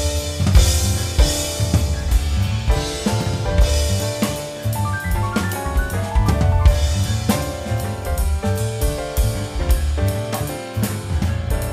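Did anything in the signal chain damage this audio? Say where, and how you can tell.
No, no signal-chain damage found.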